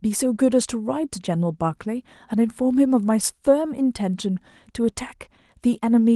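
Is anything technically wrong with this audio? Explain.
No, nothing in this speech clip points to a technical problem. It carries the light, steady character of Opus voice compression running in hybrid mode at full bandwidth, which fits a bitrate of around 24 kbps.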